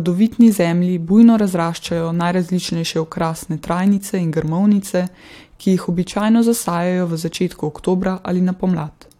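No technical faults can be heard anywhere in this recording.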